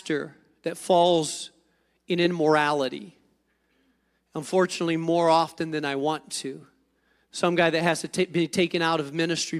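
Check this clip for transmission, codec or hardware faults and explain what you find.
Nothing stood out on listening to this speech recording.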